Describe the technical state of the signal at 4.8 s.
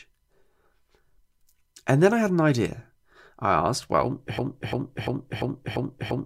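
At 4.8 s the speech is caught in a stutter: right after "idea I asked well", a fragment of about 0.34 s plays over and over, identically and back to back, five times from 4.38 s until the clip ends at 6.25 s. This is a broken-record loop. The likely cause is a stall in the player, encoder or stream that kept resending the last chunk it held, so the speech that belonged in that stretch is lost.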